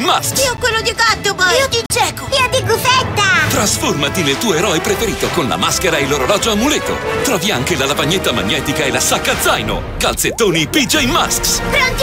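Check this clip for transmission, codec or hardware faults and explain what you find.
Two dropouts of the block of digital silence type are present. At 0.57 s a 10 ms run of samples falls to silence, and from 1.86 to 1.90 s a 40 ms run does the same. The output buffer was likely not filled in time and zeros were played in its place. The signal cuts out and returns with no fade. The first is heard as a single tick and the second as a short hole.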